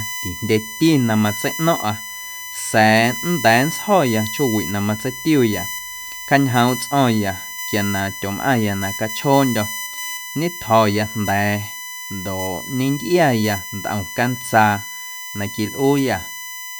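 Throughout the speech, USB whine from 1 ms bus frames leaks in as a fixed 1 kHz tone about 10 dB below the speech, peaking at 2 kHz, drawn as flat spectrogram lines.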